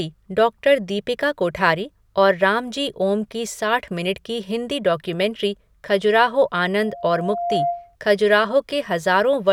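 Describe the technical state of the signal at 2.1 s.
At 2.1 s the speech signal is intact, with no technical fault present at that moment.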